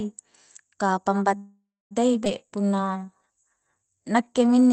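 Speech that has passed through a call codec, its top end stopping at about 8 kHz as Opus at around 24 kbps would, with three faults. From 1.37 to 1.93 s a call audio freeze holds the last sound as a fading buzz that ends in about 0.25 s of silence. It is likely packets stalling and the jitter buffer running dry. It is a pause, not a cut, since the speech resumes with nothing lost. At 2.25 to 2.27 s a skip ahead does the opposite: roughly a fifth of a second of speech vanishes and the two sides butt together with almost no gap. From 2.46 to 4.39 s a jitter buffer slow-down stretches the speech to 89% speed by repeating pitch periods, adding about 229 ms. The pitch stays unchanged, which separates this from a simple playback-rate error.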